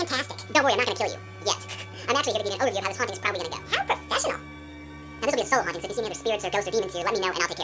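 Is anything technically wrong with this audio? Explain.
Yes. Throughout the whole clip, the audio runs at double speed and sits a full octave too high, so everything sounds hurried, thin and chipmunk-like. This is a wrong sample rate fault. The samples are being played back faster than they were captured, with no rate conversion. Speed and pitch therefore rise together by a factor of 2.0, or 12 semitones, which fits material recorded at 8 kHz being played at 16 kHz.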